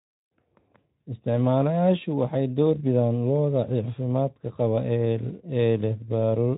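No technical faults can be heard anywhere in this speech recording. It has passed through Speex at about 15 kbps, which leaves only light coding texture and nothing above about 3.9 kHz.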